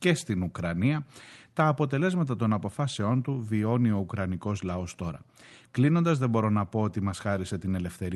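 Nothing stood out on listening to this speech recording, which carries the ordinary sound of a call connection.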